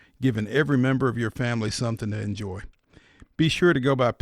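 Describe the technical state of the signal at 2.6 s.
At 2.6 s the speech sits inside a Bluetooth SBC bit pool drop running from 1.42 to 3.45 s. With too few bits, the top sub-bands get few or no bits and the rest are coarsely quantised, which fits a bit pool cut from 31 to 12, near 88 kbps. Treble dulls and gritty noise rises. Unlike a plain low-pass filter, it adds grain and recovers by 3.45 s.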